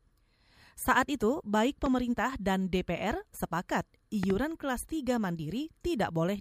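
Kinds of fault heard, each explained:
Loud pop: a sharp transient sitting on top of the speech, which carries on underneath it. The first comes just after "itu baik", at 1.86 to 1.88 s, as a single pop peaking roughly 10 dB above the speech. The second, at 4.23 to 4.32 s, is a double pop reaching about 15 dB above it. Each is a brief voltage step or pulse entering the signal path, likely from a plug, switch, static discharge or driver glitch.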